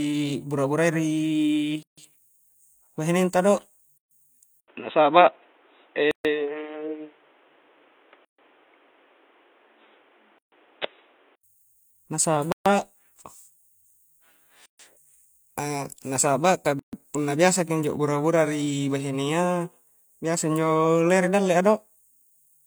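Speech with a gap at a join of encoded pieces at 1.83, 3.98 (after "bahineng ta do"), 6.11, 8.25, 10.38, 12.52, 14.66 and 16.79 s (between "na saba' ka" and "punna biasa ki injo"), about 136 ms each (the first about 148 ms). On a waveform and spectrogram these appear as empty slots with smeared edges roughly every 2 s, left by untrimmed encoder delay and padding. From 4.60 to 11.43 s, likely an input switched to a poorer device: after an 80 ms silence the sound turns dull and boxy, with nothing above 3.8 kHz on the spectrogram, a level shift of around 5 dB, and a new noise floor about 40 dB down.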